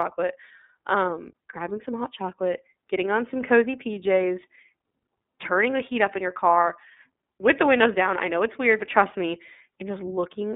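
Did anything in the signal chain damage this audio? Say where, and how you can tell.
Yes, the damage happened at the codec stage: the speech went through the iLBC codec, and its effects last the whole clip. The band runs only from about 200 Hz to 3.6 kHz, so sibilants sound dull and the low end is thin. iLBC codes each 30 ms frame's excitation on its own, without reference to the previous frame. That leaves plainly audible damage: the voice sounds a little rough and synthetic, which fits the 13.33 kbps mode.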